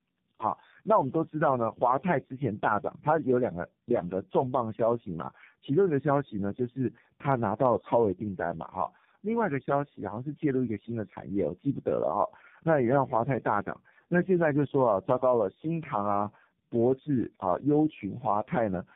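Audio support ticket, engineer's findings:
Tandem speech coding, throughout. Rough, muffled, warbly speech, no content above 3.7 kHz. Pattern fits three low-rate speech coders in a row, likely G.723.1, G.723.1, then AMR-NB, with G.711 hops between, each re-encoding the previous coder's degraded output.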